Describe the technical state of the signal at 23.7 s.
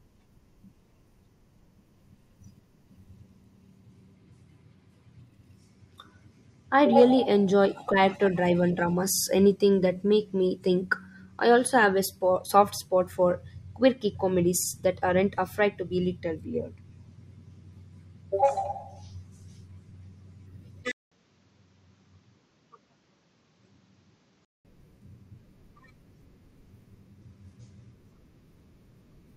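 The input has likely switched to a poorer device from 20.92 to 24.65 s, covering 23.7 s. Its narrower band removes everything above 7.7 kHz, so the speech turns dull and a few decibels quieter, with new background noise around 45 dB down, after a 200 ms silence.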